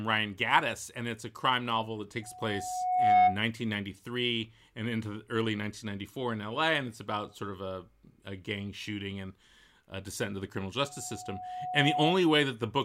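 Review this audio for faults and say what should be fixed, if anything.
Loudspeaker feedback squeal appears twice in this speech: from 2.22 to 3.42 s, just after "a crime novel that", and from 10.85 to 12.14 s, after "descent into the criminal". A 731 Hz tone swells over about a second and peaks around 10 dB, then about 5 dB, above the speech. The microphone is picking up its own loudspeaker, and the loop gain exceeds one at that frequency. On a spectrogram this shows as a bright horizontal line that thickens. On the waveform the envelope swells steadily. Prevent it by lowering monitor gain, moving the microphone away from the loudspeaker, or notching 731 Hz.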